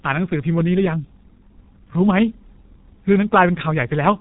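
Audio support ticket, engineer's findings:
G.723.1 codec damage, throughout the clip. Speech band-limited, nothing above 3.8 kHz: muffled, sibilants gone. Heavy hoarse texture, consonants smeared. Low-rate telephony coder with 30 ms frames and a slowly updated voice model; fits a stream around 6 kbit/s.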